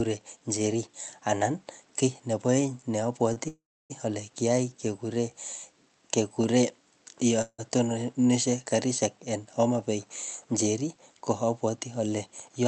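Speech carried over a call path, with its top end stopping around 8 kHz, has a sound held slightly too long at 3.33–3.38 s, just before "ale kiyai kekure": a short stall from a late packet, where the receiver stretched the last sound until the packet arrived. Soon after, from 3.48 to 3.92 s, the audio trails into a fading buzz and then about 290 ms of silence before resuming at "ale kiyai kekure". This is a call audio freeze, likely caused by packets held up in transit emptying the jitter buffer. A shorter freeze of the same kind at 7.42–7.60 s, with about 40 ms of silence, comes just before "tononishe karishek en". From 12.32 to 12.66 s the speech sounds hurried, running at about 110% speed at unchanged pitch. This is a jitter buffer speed-up, with roughly 40 ms of pitch-period pieces trimmed to cut the built-up delay.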